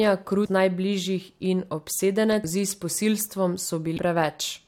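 At 0.45 to 0.47 s, again at 2.43 s and at 3.97 s, the speech is broken by short blips from damaged data in a compressed stream. Corrupted bytes make the decoder misread those frames and lose sync until it finds a valid header. On a spectrogram each appears as a thin vertical disruption, and the waveform shows a brief break in the signal's normal envelope.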